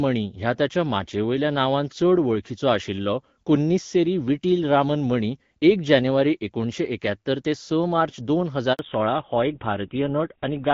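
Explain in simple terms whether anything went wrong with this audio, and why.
A handover gap at 8.73 s cuts the sound to silence for about 60 ms, until 8.79 s. The phone was switching the call from one network to another, and no sound data arrived during the changeover, so whatever was said in that moment is gone.

A fallback to narrowband follows right at 8.79 s and lasts to the end. The call drops from HD Voice to an older, lower-quality phone codec that keeps nothing above 4 kHz, so the last two seconds sound duller, rougher and more muffled than before.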